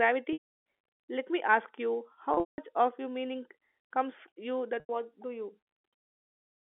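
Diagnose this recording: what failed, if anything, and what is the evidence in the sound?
Network stage: packet loss with pitch repetition, three times. At 0.33–0.44 s, 2.34–2.58 s (between "me ask you" and "of your meaning") and 4.80–4.89 s (before "do you"), the narrowband telephone audio holds a buzzy repeated cycle, then fades. The receiver is looping the last pitch period over missing packets.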